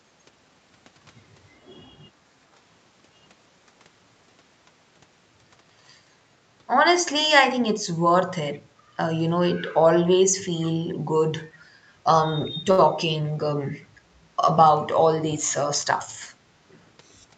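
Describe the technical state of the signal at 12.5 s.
Echo leak, from 12.45 to 12.5 s: a brief, very faint copy of the speech surfaces for about 50 ms, roughly 35 dB below the main signal and trailing it by about 0.4 s (397 ms). The likely cause is a far end playing the call over a loudspeaker, where the echo canceller failed to fully suppress what its microphone picked up and sent that residue back. The result is a short ghost of earlier speech rather than a sustained echo.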